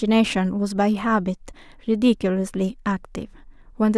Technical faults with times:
none

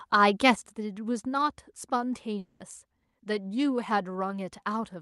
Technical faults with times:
0.55-5.02 sudden gain jump
2.38-2.61 long network dropout

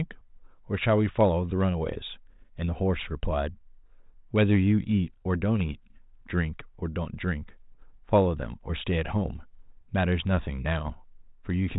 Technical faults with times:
none

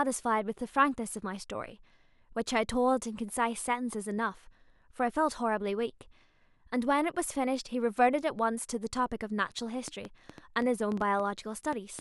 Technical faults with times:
9.88-12.00 train of clicks

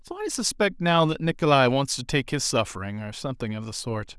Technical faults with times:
none

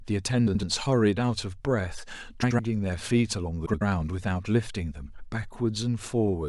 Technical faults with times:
0.47-0.63 frames out of order
2.42-2.59 frames out of order
3.65-3.82 frames out of order

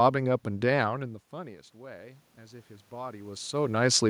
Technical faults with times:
0.61-3.61 automatic gain rising

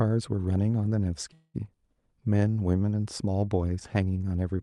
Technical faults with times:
1.33-1.56 call audio freeze

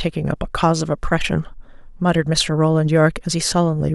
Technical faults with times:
none

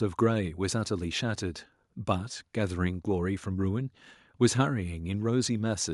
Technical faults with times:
none

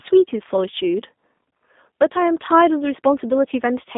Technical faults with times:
0.00-3.98 G.729 codec

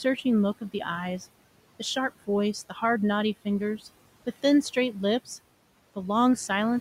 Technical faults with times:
0.00-6.80 noise suppressor artifacts

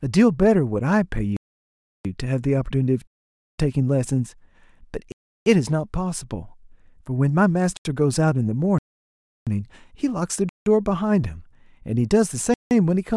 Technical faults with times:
1.37-2.05 block of digital silence
3.07-3.58 block of digital silence
5.12-5.46 block of digital silence
7.77-7.85 block of digital silence
8.78-9.47 block of digital silence
10.49-10.66 block of digital silence
12.54-12.71 block of digital silence

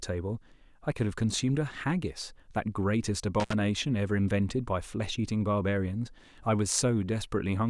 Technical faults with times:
3.40-3.53 intermittent contact

